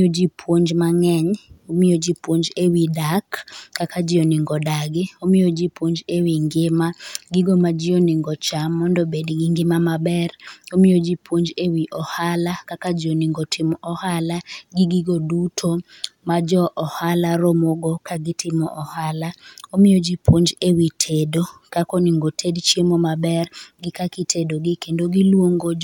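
Listening through the speech recording, nothing stood out as a technical problem at any point.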